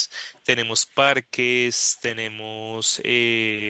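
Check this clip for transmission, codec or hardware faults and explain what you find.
There is one fault: two brief echo leak events. Across the clip, content stops at 8 kHz, as the call path's bandwidth allows.

Echo leak, 0.33–0.41 s and 1.97–2.01 s: faint delayed scraps of the speech, 352 ms late and roughly 35 to 40 dB down. These are likely loudspeaker pickup that the far end's echo canceller didn't fully remove. On a spectrogram they appear as weak smears repeating earlier patterns, while the waveform shows them as barely visible.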